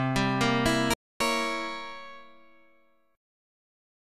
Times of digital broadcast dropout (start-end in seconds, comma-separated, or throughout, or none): 0.94-1.21